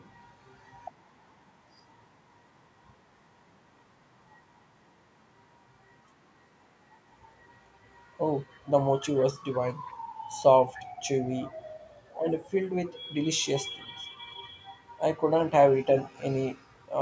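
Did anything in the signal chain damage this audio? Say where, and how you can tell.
Yes. Echo leak at the call-processing stage: two faint, delayed copies of the speech surface at 9.87–9.94 s and 11.42–11.47 s, each trailing the original by about 0.3 s and sitting roughly 35 dB and 25 dB below it. The likely cause is one side's loudspeaker, whose echo canceller let residual pickup back into the call. On a spectrogram these show as weak echoes of the preceding harmonics, cut off at 8 kHz like the rest; the waveform shows only tiny bursts.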